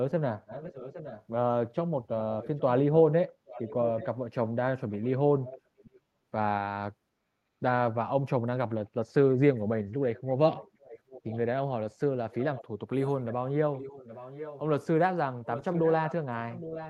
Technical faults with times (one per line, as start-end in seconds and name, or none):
0.46-1.24 echo leak
2.19-2.61 echo leak
3.46-4.07 echo leak
4.90-5.99 echo leak
10.16-11.38 echo leak
12.31-14.60 echo leak
15.44-16.89 echo leak